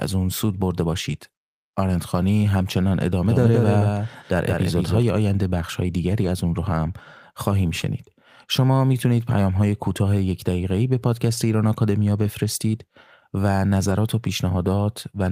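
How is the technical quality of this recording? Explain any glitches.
The recording has two kinds of fault: a doubled section early on and several brief patches of degraded audio scattered through the speech.

From 3.26 to 5.02 s there is a doubled audio track. A second full-band copy of the speech trails the original by roughly a fifth of a second, about 5 dB quieter. It has no reverb tail, and it starts and stops abruptly. The likely cause is an echo from a second, slower capture path being mixed in.

At 3.43, 6.23, 7.81, 9.29, 12.25 and 13.89 s, a lost packet was rebuilt from error correction. Each time a single 20 ms packet went missing, and the decoder filled it from the low-bitrate backup copy carried in the next packet. That avoids a dropout, but each of those instants sounds briefly rough and noisier.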